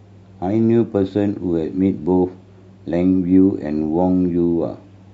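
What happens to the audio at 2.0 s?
Nothing goes wrong at 2.0 s; the speech plays through that moment intact, with no dropout, click or other fault.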